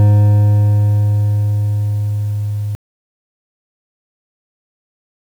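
At 2.75 s the music cuts out abruptly. An audio dropout to silence follows and runs to the end of the clip. The music never returns. The gap is silent, with no room tone or background hiss left underneath. The input was likely lost, perhaps through a disconnected device, a failed link or an accidental mute, while the recorder kept writing silence. Everything played after that moment is missing.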